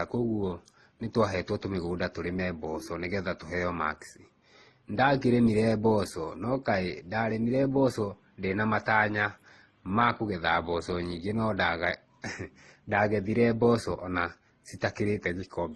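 Throughout this speech recording, nothing above 12.1 kHz survives, and two different kinds of compression artefact are heard together. This is likely transcoding between lossy codecs, consistent with 32 kbit/s MP3 re-encoded to 16 kbit/s Opus.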